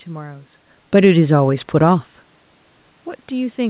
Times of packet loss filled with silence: none

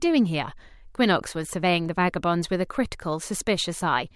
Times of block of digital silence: none

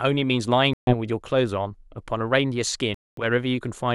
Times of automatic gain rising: none

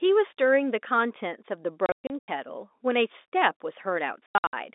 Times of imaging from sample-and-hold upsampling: none

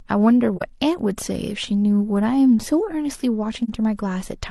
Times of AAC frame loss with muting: 0.56-0.62, 3.64-3.69

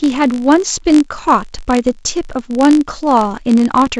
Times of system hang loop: none

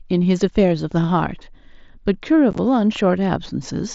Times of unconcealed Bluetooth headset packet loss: 2.51-2.59

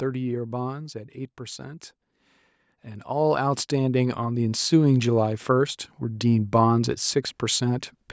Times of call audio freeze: none

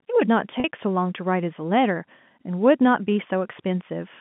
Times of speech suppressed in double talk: none

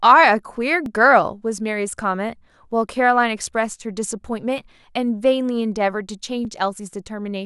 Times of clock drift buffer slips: 0.86-6.45

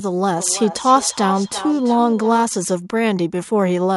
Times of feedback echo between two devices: 0.33-2.49

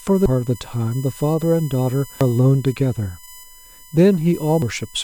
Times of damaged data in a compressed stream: 0.26, 2.21, 4.62

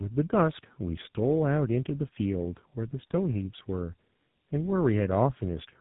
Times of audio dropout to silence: none

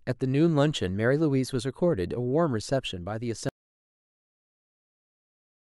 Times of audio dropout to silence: 3.49-5.67

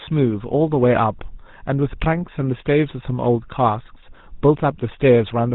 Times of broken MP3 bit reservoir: none

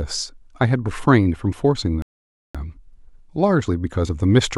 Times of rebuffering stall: 2.02-2.55

